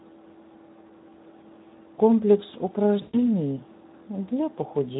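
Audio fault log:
Throughout, Speex codec: the speech sounds noisy and hoarse, with plainly audible coding damage. At a rate that fits about 11 kbps, this CELP coder has too few bits to model the excitation accurately, so the residual is reproduced as rough, grainy noise instead of clean harmonic structure.
3.01–3.28 s, VoIP packet loss concealed by the speech codec: the speech smears into a stretched, fading sound, then stays weak or distorted as it recovers. About 120 ms of packets went missing. The decoder kept repeating its last pitch and filter with a falling gain, and because each frame depends on the one before, the decoder needed extra time to rebuild its state once packets returned.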